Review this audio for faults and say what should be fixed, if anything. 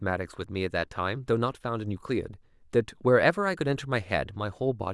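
Nothing needs fixing, because the speech signal holds steady throughout, with no breaks, level jumps or other technical problems to correct.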